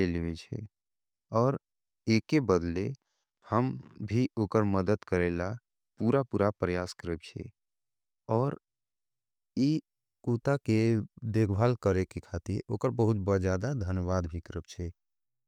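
A speech recording with no technical faults to report. Nothing in it calls for a time stamp or a cause.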